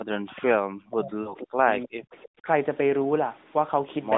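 From the start to 1.68 s the speech keeps sinking and breaking up, falling at its deepest by about 40 dB and dropping out in pieces for roughly a second and a half in all. The likely cause is speech suppressed in double talk: with both sides talking, the echo canceller could not tell this talker from its own loudspeaker echo and turned everything down.

Inside that stretch, from 1.22 to 1.34 s, there is a short drawn-out, fading smear, with the voice coming back a little rough. These are lost AMR speech frames. About 40 ms of audio is missing, which fits two 20 ms frames failing their checks. The narrowband decoder, running at 12.2 kbps on a 200 to 3700 Hz line, filled the gap by repeating the last good settings with falling gain.

At 2.41 to 2.47 s a brief dip of about 20 dB returns for roughly 70 ms, likely the same double-talk suppression.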